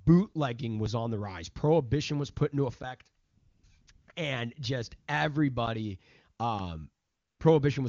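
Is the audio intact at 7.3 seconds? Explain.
No, at 7.3 seconds you're hearing AMR comfort noise, not the real signal. From about 7.05 to 7.39 s, a 340 ms stretch, the phone decided the talker had gone quiet and stopped sending speech frames. The receiving end filled that gap with synthetic noise built from a rough sketch of the background's level and spectrum. So the actual room sound is swapped for a smooth, steady hiss that switches in and then out again.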